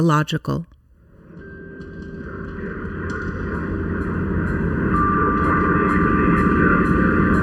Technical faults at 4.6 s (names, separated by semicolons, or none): channel delay (comb filtering)